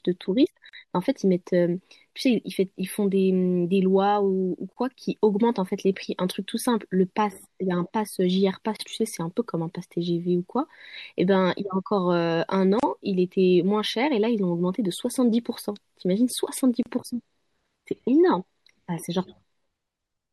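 Throughout the speech there is audible codec damage: the treble stops at a fixed ceiling, and quieter detail flickers in and out from moment to moment, giving a watery, swirling texture with metallic chirps on s sounds and blurred consonant attacks. That pattern is likely MP3 compression and fits a low bitrate near 64 kbps. A plain low-pass filter would dull the top end smoothly, without the shifting, bubbly artefacts.

Short silences then cut into continuous sound at 0.69 s (about 41 ms), and at 4.73, 8.76, 12.80 and 16.83 s (32 ms each), every 4 seconds. These are gaps at joins of encoded pieces. Each piece was encoded separately, and the encoder's start-up delay and final-frame padding were left in at each seam. Unlike a packet dropout, the gaps fall on a strict grid, their edges are smeared by the codec, and the speech resumes exactly where it stopped, with nothing lost.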